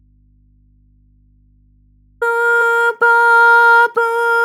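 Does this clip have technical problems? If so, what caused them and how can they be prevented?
Yes. The clip opens in an audio dropout to a faint residue that is already under way at 0 s. The wanted sound is missing until 2.22 s, when it returns abruptly at full level. During the gap only mains hum remains, around 40 dB below the signal. The break was likely a lost or intermittent connection upstream, while the later stages stayed live and picked up hum from the open input. Securing cables and connectors, and monitoring the input before recording, would prevent it.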